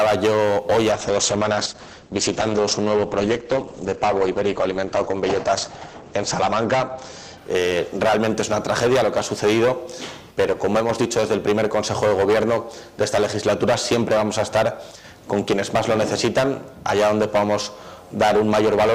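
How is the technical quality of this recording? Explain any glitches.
There's one real glitch here, a call bitrate drop from 0.92 to 10.57 s. The bandwidth estimate collapsed, so the encoder coarsened and cut the top from 20 kHz to 8 kHz, which fits roughly 10 kbps. At the lowest rate, held for about 4.8 s, the audio sounds muffled and watery before recovering.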